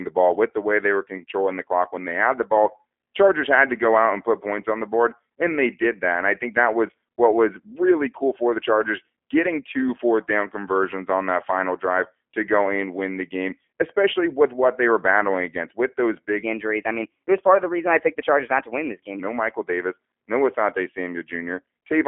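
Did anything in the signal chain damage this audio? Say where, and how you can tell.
Yes. The G.729 codec stage has shaped the whole clip of speech. Everything sits in a telephone band, roughly 250 Hz to 3.4 kHz, and nothing is heard above 3.5 kHz. The damage is plainly audible: a rough, buzzy, slightly synthetic quality, which fits 8 kbit/s G.729A. That coder rebuilds each 10 ms frame from a vocal tract filter, a pitch predictor and a few fixed pulses instead of the original waveform.

From 16.43 to 19.20 s there is a section at the wrong speed. The speech runs about 1.17 times fast, so it sounds hurried, and the pitch rises by roughly three semitones at the same moment. Speed and pitch shift together, which points to resampling or playback against the wrong clock, likely in an editing or playback step. A codec fault would not move both that way.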